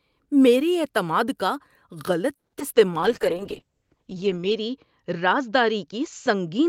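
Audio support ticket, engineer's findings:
Sound stalls at 2.35 s, brief fading tail then about 160 ms of near-silence, resumes at 2.55 s with nothing skipped. Call audio freeze, likely late packet delivery draining the jitter buffer; receiver extended the last sound, inserting roughly 180 ms of extra delay.

Two short smears or wobbles right after the restart, at 2.59–2.62 s and 2.74–2.77 s. Short concealed packet loss: about 20 ms and 40 ms of audio never decoded in time, patched by extrapolating the preceding sound then crossfading back. Second event also trimmed the delay by around 30 ms.

From 2.80 s to 3.32 s the speech drags, roughly 92% speed with unchanged pitch and slightly stretched sounds. Jitter buffer slow-down: receiver repeating pitch periods and pause fragments to rebuild its reserve, adding 46 ms.

From 3.00 s to the end, audio turns rough and muffled, top end gone above 8 kHz instead of extending to 20 kHz. 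Call bitrate drop, Opus encoder cut from 40 kbps to 8 kbps after the bandwidth estimate fell; lowest rate held for 1.51 s.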